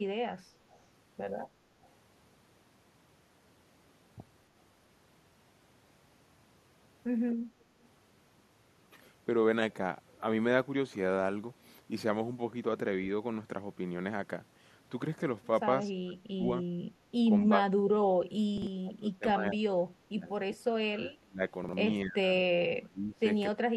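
At 0.71 to 0.79 s and 1.83 to 1.89 s, faint echo leak: a copy of the speech delayed 250 ms, about 35 dB down, likely from a loudspeaker echo canceller letting residue through. On a spectrogram it shows as a ghostly repeat of earlier harmonics.

From 16.04 to 16.72 s, speech suppressed in double talk: the speech dips roughly 25 dB for about 0.3 s. The waveform envelope sags, likely because both sides speak at once.

At 17.01 to 17.08 s, background gated by the echo canceller: the room noise drops about 7 dB for 70 ms, a brief notch in the noise floor.

The double-talk suppression returns, roughly 30 dB deep, at 17.46 to 20.57 s, 21.18 to 21.42 s, 22.04 to 23.24 s and from 23.55 s to the end. The speech thins or cuts in pieces, leaving gaps in the waveform.

At 18.58 to 18.67 s and 21.64 to 21.73 s, chunks out of order: a 46 ms block plays one chunk late, giving a jumbled moment. The spectrogram shows vertical seams where harmonic tracks jump.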